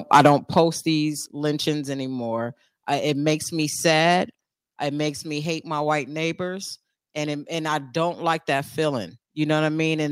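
Microphone overload runs from 0.13 to 0.6 s, ending just before "these lynchings anymore I". Likely the input level was set about 7 dB too high, so the converter's limit flattened the tops of around 3 percent of the waveform, giving the loudest sounds a crackling, distorted edge.

Microphone volume stepped down three times: at 0.27 s by about 3 dB, at 1.26 s by about 4 dB just before "lynchings anymore I it", and at 4.32 s by about 3 dB right after "it makes me sad". The likely cause is the call software lowering the device's input gain in single steps, so the speech and background drop in level together and abruptly.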